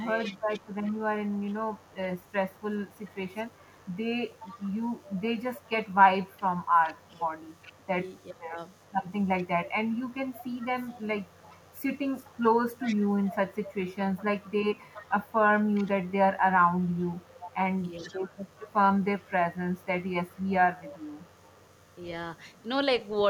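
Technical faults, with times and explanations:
Throughout: mains buzz, a steady raspy buzz on 50 Hz, roughly 35 dB below the speech. Sharp switching spikes twice per mains cycle, probably from a dimmer, rectifier or missing shield, spread harmonics up to several kHz. That is why it sounds gritty rather than like a smooth low hum.
0.23 to 8.23 s, 8.78 to 16.14 s, 16.77 to 21.95 s, 22.54 to 23.2 s: echo leak. A faint copy of the speech returns about 0.41 s late, around 20 to 30 dB down. The likely cause is a loudspeaker echo canceller leaving residue. The fixed delay and discrete repeat set it apart from room reverberation.
0 to 0.64 s, 7.78 to 8.57 s, 14.43 to 14.51 s, 18.0 to 18.35 s: speech suppressed in double talk. The speech dips in short pieces, from a slight drop up to about 20 dB near 8 s, while both sides overlap. The likely cause is an echo canceller turning down its own talker. 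These are level dips tied to overlap, not packet-loss gaps.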